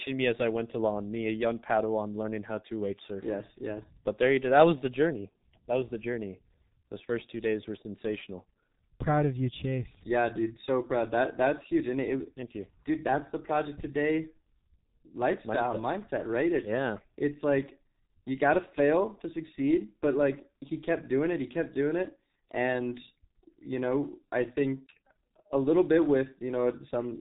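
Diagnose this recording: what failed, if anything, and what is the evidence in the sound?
The failure is at the codec stage: the speech went through the G.723.1 codec at a very low rate, which fits its 6.3 kbit/s mode. Nothing above 4 kHz survives, and the slowly updated voice model in 30 ms frames leaves the speech muffled and hoarse, with consonants smeared throughout.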